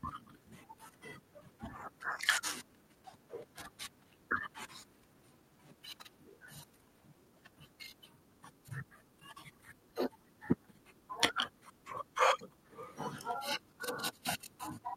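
All through the speech there is a faint unevenness in timing, with small skips that never settle into a regular rhythm. This comes from clock drift between sender and receiver: the sending device's audio clock runs roughly 5 percent faster than the receiving one. Audio arrives a little faster than it is played out, so the receiver's jitter buffer keeps filling and has to be trimmed back again and again at uneven intervals.

From 0.21 s to 14.96 s the speech moves with a slightly hurried, unsteady tempo and occasional tiny hiccups where a sliver of sound seems to go missing. These are repeated timing corrections, the receiver's way of keeping up with the faster sender. Each time the buffer grows too full, it drops a short piece of audio, always cutting and never repeating. The net effect is playback at about 105 percent of the original pace, with the edits spaced unevenly across the stretch.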